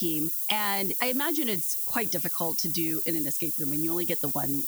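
From the first moment to the end, the speech sits under a thin, steady hiss that climbs sharply toward the top of the band. That's low bit depth with noise shaping: the coarse rounding, which points to about 5 bits, gets pushed upward, leaving hiss roughly as loud as the speech itself.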